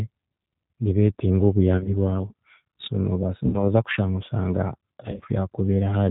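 From the start, the whole speech track carries plainly audible G.729 codec damage at 8 kbit/s. Nothing above 4 kHz survives, and the voice has a slightly rough, synthetic grain because it is rebuilt from a vocal tract filter, a pitch predictor and a few pulses per frame. Unlike the brief faults that follow, this colouring is constant and never comes and goes.

Three episodes of VoIP packet loss concealed by the speech codec then interrupt it. The first runs from 1.78 to 1.94 s, just before "bwawe so". The gaps there are scattered over about 80 ms with no run longer than 20 ms, which fits around 40 ms of missing audio. The second, from 3.46 to 3.63 s, ends just before "kushanga oshanga" and fits roughly 70 ms lost. The third, from 5.06 to 5.25 s, follows "kushanga oshanga" and is again scattered, over about 160 ms, which fits around 80 ms lost. In each, the decoder repeats its last pitch and filter at falling gain, so the sound smears into a fading buzz or coloured noise rather than dropping to silence or clicking. 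Because each frame builds on the previous one, the voice stays weak or distorted for a short while after the packets return.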